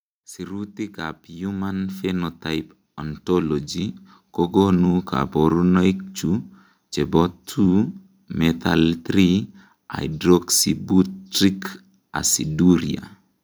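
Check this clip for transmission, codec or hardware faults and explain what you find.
One fault is present: automatic gain rising from 0.47 to 4.85 s. The gain control judged the speech input too quiet and raised its gain by about 14 dB, so voice and background swell together. The waveform envelope ramps upward and the spectrogram brightens evenly across all frequencies.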